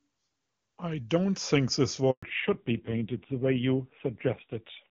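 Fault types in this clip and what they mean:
Handover gap: The call was passed from one network to another, and for about 120 ms, from 2.11 to 2.23 s, no speech frames got through, so the voice fades out almost at once and there's just dead air until the new link picks up. Anything said in that slice is gone for good.
Fallback to narrowband: Right after the gap, from 2.23 s to the end, the call lands on a much older, narrowband codec at a low bitrate, which fits AMR-NB at 5.9 kbit/s. Nothing above 4 kHz survives, so the crisp top end of the first half disappears and the speech turns dull, boxy and rougher. Before the switch, the wideband path at 23.85 kbit/s sounds clean.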